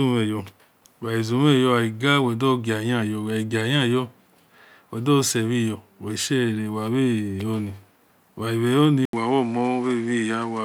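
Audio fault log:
9.05 to 10.64 s, input switched to a poorer device: after a short 80 ms gap the sound turns duller, with nothing above about 10.9 kHz, and a new background noise sits about 30 dB below the signal, while loudness stays roughly the same. The likely cause is the recording moving to a different microphone that passes a narrower band. The gap and the new noise floor arriving together with the band loss separate this from a plain low-pass filter or codec bandwidth drop, which would leave the background unchanged.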